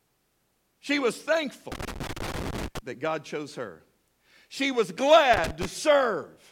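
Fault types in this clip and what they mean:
Loose connector crackle: Irregular bursts of scratchy crackle break into the speech, first from about 1.72 s to 2.79 s, then more briefly from 5.34 s to 5.65 s. The sound is chopped and spluttery rather than steady. A worn or dirty contact in a plug or jack keeps making and losing connection as it shifts, cutting the signal in and out, and any DC on the line jumps with each break into a click.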